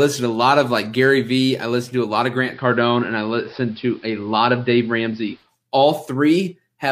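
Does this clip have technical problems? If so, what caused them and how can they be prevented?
Yes. Digital radio blending to analogue from 2.40 to 5.51 s: the receiver lost digital reception and crossfaded over 150 ms to AM, adding faint hiss. To prevent it, improve the antenna or reception so the digital signal holds.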